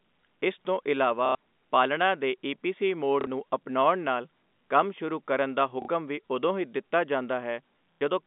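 Short robotic stutters occur at 1.26 to 1.35 s, 3.21 to 3.27 s, 5.82 to 5.88 s and 7.98 to 8.01 s. This is packet loss with the last packet repeated, which fits 30 ms packets, heard through a narrow G.711 telephone band.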